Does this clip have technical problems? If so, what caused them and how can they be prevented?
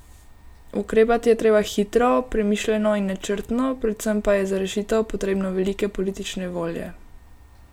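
No, there are no technical problems to report here.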